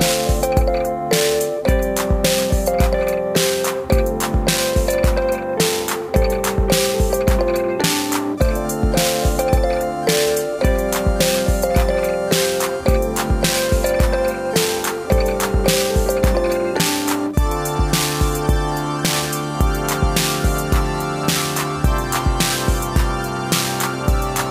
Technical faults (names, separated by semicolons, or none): none